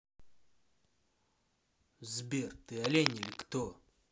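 Cable scratch noise runs from 2.75 to 3.43 s in this speech recording, a burst of dense, uneven scratching and rustling lasting about 0.7 s and sitting only about 5 dB below the speech. The likely cause is a worn cable, connector or control being moved, so its contact resistance fluctuates rapidly and adds irregular noise to the signal until the contact settles.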